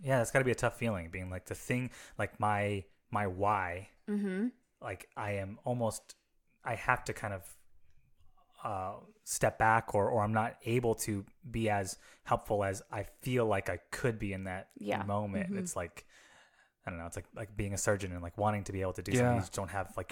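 No faults detected anywhere in the speech recording.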